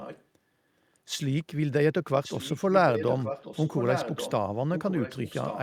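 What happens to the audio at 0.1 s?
At 0.1 s an echo leak is audible, running from the start of the clip to 0.24 s: a faint, delayed copy of the speech trailing about 1.13 s behind, roughly 15 dB below the main level. The likely cause is a far-end echo canceller letting its loudspeaker pickup back into the line. On a spectrogram it appears as a weaker, time-shifted repeat of the speech's harmonic pattern; the waveform shows a low-amplitude overlay.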